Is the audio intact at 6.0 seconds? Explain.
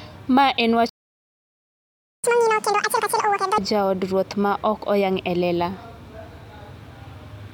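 Yes, at 6.0 seconds the audio is intact, with no dropout, click, distortion or other audible fault.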